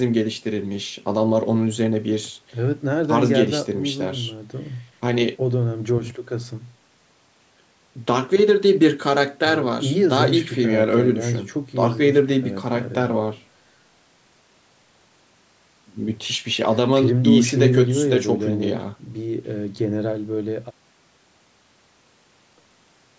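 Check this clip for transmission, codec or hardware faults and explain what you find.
Nothing stood out on listening to this speech, which carries the usual character of a call microphone path with its lowest bass trimmed and no content above 8 kHz.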